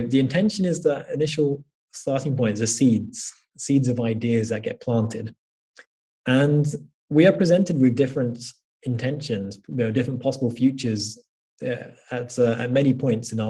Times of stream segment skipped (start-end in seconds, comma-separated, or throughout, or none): none